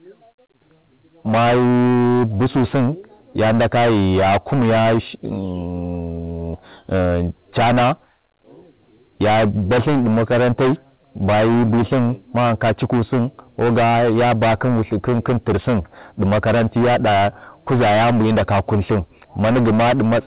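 Speech, hard clipped from start to finish: the signal is driven about 20 dB past what the chain can pass, so nearly a third of the samples are cut flat. Unlike soft saturation's rounded warmth, the flattened peaks produce a harsh, constant fuzz on every loud syllable. The band stops at 4 kHz, which points to a G.711 mu-law call path, and that explains the muffled top rather than the fuzz.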